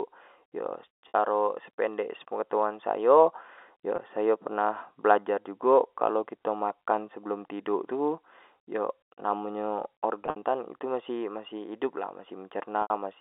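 Packet loss with pitch repetition occurs at 1.08 s (60 ms, before "sependek penegtahuan sayo"), 3.96 s (20 ms, before "sayo pernah belajar"), across 10.22–10.42 s (120 ms in scattered gaps) and at 12.82 s (80 ms). The receiver fills each gap by repeating the last pitch period, which sounds like a brief buzzy hold on the short 20 ms gap, while the longer gaps fade into silence before the speech returns with a short cross-fade. On a spectrogram these show up as frozen, evenly spaced harmonic stripes, and the waveform shows repeated identical cycles that fade out.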